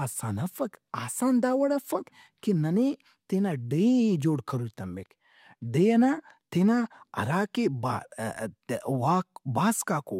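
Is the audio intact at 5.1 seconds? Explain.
Yes, at 5.1 seconds the speech runs intact, with no dropout, click, distortion or other audible fault at that point.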